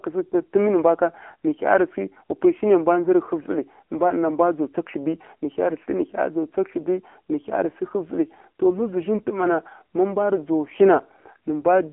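From start to end the speech carries AMR narrowband mobile codec damage. The band runs from 250 Hz to 3.4 kHz with nothing above 3.7 kHz, and the voice sounds plainly buzzy and synthetic, as the pulse-driven vocal-tract model is starved of bits, which fits a low mode around 7.4 kbps.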